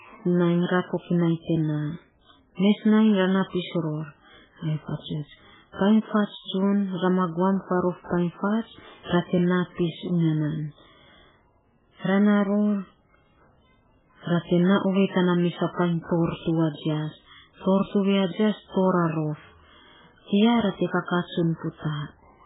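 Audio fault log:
Throughout, MP3 compression: the speech has no content above 3.8 kHz and carries heavy codec damage, with a watery, swirling texture and smeared consonant onsets. This is likely a very low-rate MP3 encode, consistent with roughly 8 kbps. Starved of bits, the encoder discards the treble at a fixed cut-off and drops weak frequency lines that flicker in and out between frames, producing the swirl and blurred attacks.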